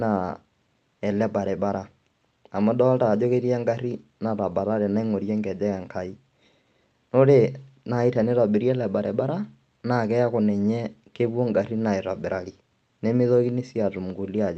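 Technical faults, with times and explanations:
Nothing stood out on listening to this speech recording.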